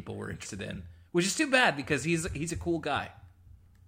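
At about 0.44 s you get compressed frames skipped: the speech jumps forward, with what sounds like roughly a tenth of a second simply gone. That gap fits around five frames of about 23.2 ms each going missing, either absent from the stream or thrown out by the decoder as damaged. At the join the sound lurches ahead.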